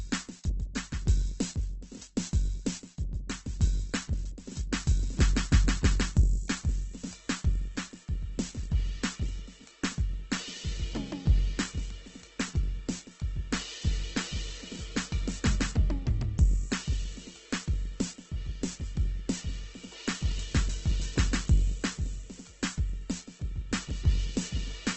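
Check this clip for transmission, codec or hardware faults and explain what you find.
One codec fault runs through the whole music clip. Heavy Opus compression, likely at a very low rate near 12 kbps, leaves nothing above 8.2 kHz and turns tones grainy and rough. Unlike MP3's swirling holes, the empty bands are filled with noise.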